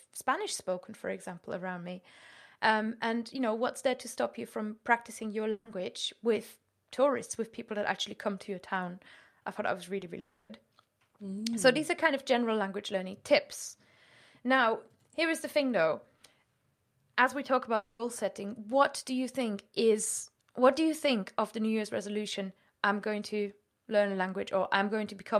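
At 5.51 to 5.67 s, right after "you from practicing your", a burst of packet loss leaves a 140 ms hole. The receiver stretches the last sound and turns it down, so it becomes a held buzz or fading hiss, and speech resumes at "with tourists with people" with that 140 ms gone.

At 9.99 to 10.03 s, after "I thought that was", short concealed packet loss covers only 20 ms. The receiver continues the last sound briefly and blends back, so this is heard as a quick smear or wobble, not a held tone.

At 10.19 to 10.51 s and again at 17.75 to 18.01 s, just after "we talk", the sound is a 300 ms and then a 240 ms stretch of continued, fading buzz or hiss with no silence. The speech picks up with that much audio missing. The likely cause is a long network dropout, which lasts longer than the 140 ms burst.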